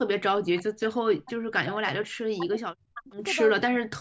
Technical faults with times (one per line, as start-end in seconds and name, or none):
0.00-2.05 speech suppressed in double talk
2.35-3.23 speech suppressed in double talk
3.58-4.00 speech suppressed in double talk